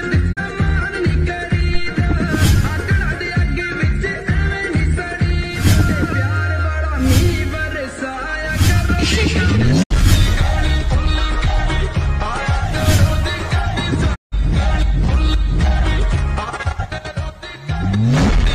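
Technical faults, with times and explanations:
0.32–0.39 s, 9.82–9.92 s, 14.14–14.34 s: digital broadcast dropout. The receiver muted on failed frames, with a quick 20 ms fade. The holes grow from about 32 to 160 ms, fitting one, two and five lost frames.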